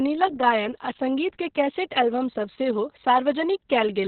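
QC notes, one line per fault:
Throughout: Opus voice compression, heavy. Nothing above about 4.3 kHz, fitting narrowband SILK at roughly 6 kbps, so speech sounds muffled, hoarse and coarsely coded.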